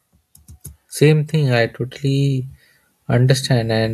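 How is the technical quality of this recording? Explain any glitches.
The recording has one clear glitch: the level climbs partway through. From 1.3 s to the end, there is automatic gain rising. The automatic gain control judged the input too quiet. It then raised its gain step by step, by about 6 dB in total. Because the boost applies to everything entering the microphone, the speech and the background noise swell together. The increase is gradual, not sudden. It sounds like someone slowly turning up the volume.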